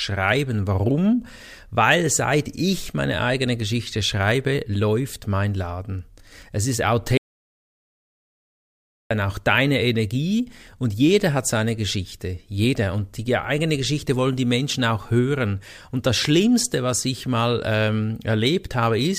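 It's a speech recording, and there's an audio dropout to silence from 7.17 s to 9.11 s, so roughly 1.93 s simply vanishes. The speech cuts off abruptly and comes back in mid-flow at "auch deine", and the gap in between is dead silence with no room tone at all. That points to the input being lost, likely a dropped connection or a stray mute, while the recorder kept writing silence, so whatever was said there is gone.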